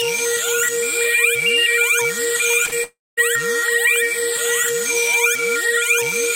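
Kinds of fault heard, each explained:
Short concealed packet loss: a brief smear or wobble at 2.65 and 2.69 s, where two 20 ms gaps were patched by continuing the preceding sound.
Long network dropout: from 2.83 s the sound fades into a dying buzz or hiss, then silence or a low steady noise until 3.19 s, likely a 0.34 s stretch that never arrived.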